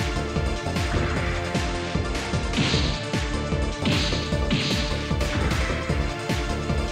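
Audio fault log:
1.54–3.78 s, Bluetooth SBC bit pool drop: for about 2.2 s the treble dulls and a gritty, grainy noise rises under the sound, then clears as the rate recovers. The change points to the encoder halving its bit pool, from 28 down to 14, which fits roughly 108 kbps. With so few bits per frame, the upper sub-bands get little or no allocation and the remaining bands are coarsely quantised, producing the muffled top end and the granular noise.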